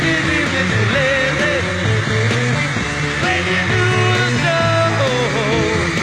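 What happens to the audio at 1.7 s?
At 1.7 s the audio is inside an adaptive stream starting at a low bitrate, which runs from 0.0 to 4.0 s. The player opens on a cheap version to start fast. Treble sounds synthetic and artefacts are stronger, which fits about 16 kbit/s HE-AAC. Quality jumps at 4.0 s without a gap.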